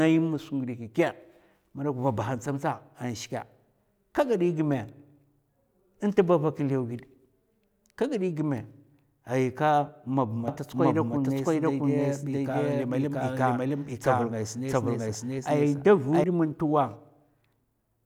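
After "ma ba", 10.48 to 16.24 s, the speech echoes about 0.7 s late at similar loudness: a doubled audio track, likely from a slower second capture.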